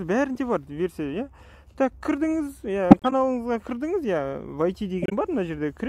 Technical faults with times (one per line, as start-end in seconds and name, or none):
2.91-3.13 corrupt frame muted
5.02-5.13 corrupt frame muted